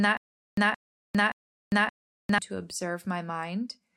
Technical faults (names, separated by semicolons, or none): stutter with silent gaps